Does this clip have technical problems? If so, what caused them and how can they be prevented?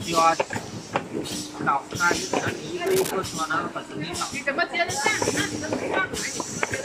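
Yes. Cable scratch noise runs from 2.86 to 3.12 s. It is a rough, scratching burst only slightly quieter than the sound itself. A worn cable or connector shifting under movement likely caused it. Replace worn leads and secure cables so they cannot move while recording.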